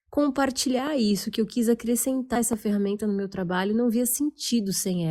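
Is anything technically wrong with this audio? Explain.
Yes, there are two kinds of fault.

Loud pop, at 0.87–0.89 s just before "isso que eu quis" and again at 2.53–2.55 s before "ferramenta no meu trabalho": each is a single sharp pulse around 10 dB above the speech, likely a voltage spike from a switch, plug or static. The speech continues underneath.

Compressed frames skipped, at 2.35 s just before "essa ferramenta no meu": the audio jumps forward by about 150 ms, which fits roughly seven lost 20 ms frames.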